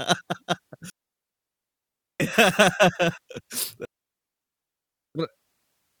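Speech with two digital wireless dropouts, from 0.90 to 2.20 s and from 3.85 to 5.15 s, each a clean 1.3 s mute where the receiver cuts out after losing data. No noise bursts or hiss surround the holes, unlike an analogue wireless dropout.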